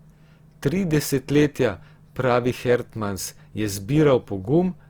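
Likely Opus compression at a low rate, around 24 kbps in its music mode, starves bands of bits throughout, so the speech sounds plainly grainy, rough and noisy.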